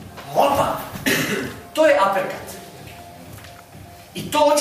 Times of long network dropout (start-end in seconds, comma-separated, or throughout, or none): none